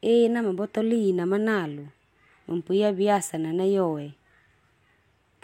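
No technical faults can be heard anywhere in the recording; the signal stays continuous and stable throughout.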